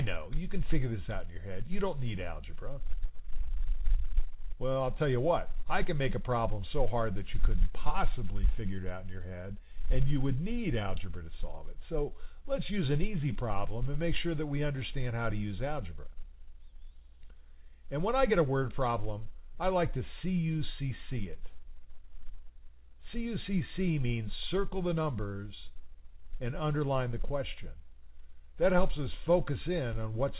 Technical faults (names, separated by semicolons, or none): none